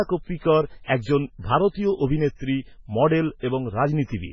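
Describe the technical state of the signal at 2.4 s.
At 2.4 s the speech carries the same heavy coding damage present throughout the clip, most likely from MP3 compression at a very low bitrate, which fits roughly 16 kbps. Nothing is present above 7.3 kHz, where the encoder has cut the treble to save bits. Below that, weak frequency components are dropped and reinstated from frame to frame, giving the sound a watery, swirling quality with smeared onsets.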